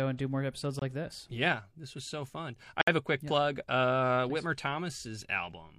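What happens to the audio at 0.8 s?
At 0.79 to 0.82 s there is a gap between stream segments: the timestamps of two consecutive segments don't meet, leaving about 24 ms that no segment covers, a boundary which fits segments roughly 2 s long. The player fills that span with silence. Right after "and do more episodes" the speech drops to a hard-edged hole before "like this" resumes. Nothing is missing from the speech itself; the silence is inserted time rather than lost audio.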